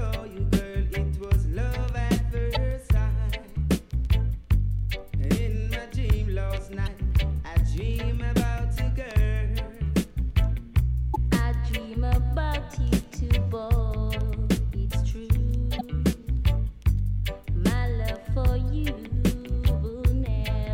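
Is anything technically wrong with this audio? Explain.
Yes. Four short blips break through the sound, at 2.54–2.57 s, 6.83–6.88 s, 11.12–11.16 s and 15.77–15.81 s, each lasting roughly 25 to 45 ms. They are the signature of damaged data in a compressed stream: some bytes in the encoded file are wrong, so the decoder misreads those frames, loses its place and hunts for the next valid frame header, leaving a brief chirp, squawk, click or short hole where the corrupted data should have decoded cleanly.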